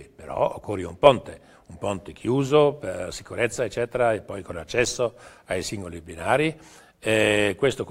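A block of digital silence at 4.85 s: 5.8 ms of samples, fitting a 256-sample buffer, drop to zero without fade, heard as a tick.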